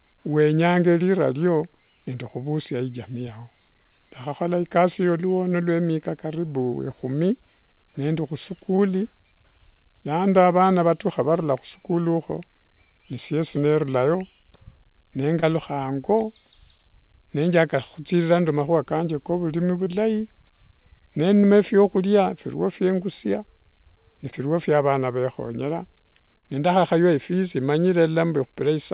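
Short concealed packet loss hits the speech at 8.76, 15.40, 17.70, 19.84 (after "kanje ka vurimi"), 21.40 (before "phiakhuria phirio"), 24.30 and 26.38 s (after "vana vekhonyera"). About 20 ms went missing each time, 40 ms at 26.38 s. The decoder stretched the preceding sound to cover each gap, causing brief smears or wobbles. The audio passes through a G.711 A-law call path at 64 kbps, with nothing above 4 kHz.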